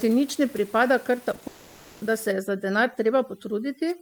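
A speech clip with a run of short concealed packet loss at 1.31, 1.35 and 1.39 s: three quick smears where about 20 ms each was patched by stretching the preceding sound, too brief to leave a gap. From 1.47 to 2.03 s a sustained continuation, fading but never reaching silence, is likely a long network dropout, with roughly half a second of missing audio filled in rather than lost in a single tick. From 2.32 s to the end, overdone noise removal leaves a background of twinkling specks, unlike the steady room noise about 25 dB below the speech before that point.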